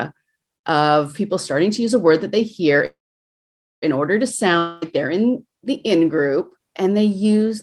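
From 2.85 s to 3.84 s the speech halts in a call audio freeze: the last sound trails into a fading buzz, then about 0.87 s of silence, likely from late packets draining the jitter buffer. Speech resumes exactly where it stopped, nothing skipped, just pushed about 0.97 s later.

At 4.58 s a long network dropout lasts until 4.84 s. The sound is stretched into a short fading hiss with no silence. Unlike the freeze, when speech returns about 0.24 s of it is gone, likely because those packets never arrived.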